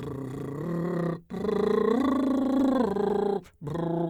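From 2.43 to 3.14 s, scattered short gaps: about five packet losses, each patched by repeating sound, heard as ticks, seen as repeated waveform slivers.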